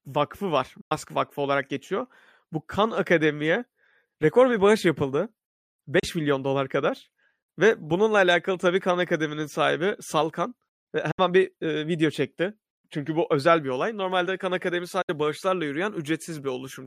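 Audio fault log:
0.81–0.92 s, 5.99–6.04 s, 11.11–11.19 s and 15.02–15.10 s: digital broadcast dropout. The speech drops into brief silent holes, about 110, 50, 80 and 80 ms long, each with a quick 8 ms fade rather than a hard click. The receiver lost good frames and muted until clean data arrived, so whatever was sent during each gap is simply gone. The lost stretches come in multiples of 32 ms, which fits a codec that sends audio in 32 ms frames.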